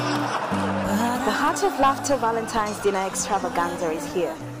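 No technical faults can be heard anywhere in this clip. Nothing in the sound calls for correction or further attention.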